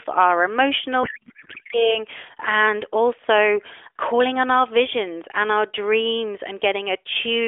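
Codec payload misread, from 1.04 to 1.99 s: the AMR frames were octet-aligned but decoded as bandwidth-efficient, so every field lands in the wrong bits. The speech turns into garbled, warbling noise that barely tracks it, inside narrowband AMR telephone audio.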